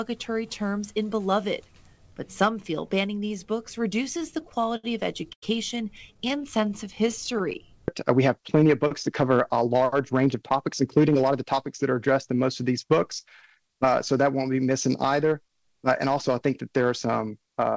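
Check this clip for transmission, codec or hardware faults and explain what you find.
Three kinds of transmission fault are audible, all from the receiving side of a call. The band stops at 8 kHz, which points to G.722 at 64 kbps. That part of the path works as expected.

Repeated stalls (stutter) occur twice. From 4.04 to 4.85 s there are nine gaps, together 157 ms, the longest 72 ms. That is about a fifth of the span. From 6.14 to 7.63 s there are sixteen shorter gaps, totalling 133 ms, none over 12 ms. Packets arrived late, so the jitter buffer kept running dry. The receiver extended the last sound each time. Nothing is lost, but the audio drags and judders.

A short stall from a late packet falls between 5.33 and 5.44 s. One packet missed its slot and the buffer emptied. The receiver held the previous sound for 97 ms, then resumed exactly where it stopped. No audio is missing. The effect is a single sound sustained too long, with a faint buzzy or dipped quality. 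It also adds 97 ms of delay, which the buffer carries forward.

A jitter buffer speed-up runs from 9.56 to 11.54 s. The buffer had built up more audio than its target. To shed the excess, the receiver cut many tiny pitch-period slices, about 150 ms in total. Playback runs at 108% speed with unchanged pitch. The passage sounds slightly rushed, and its timing feels compressed.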